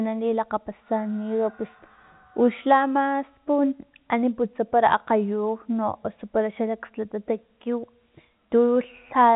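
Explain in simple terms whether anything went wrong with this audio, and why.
Bit errors on a digital phone line at 0.36 to 0.38 s: flipped bits change single samples in one short stretch, not a silent gap like a dropout.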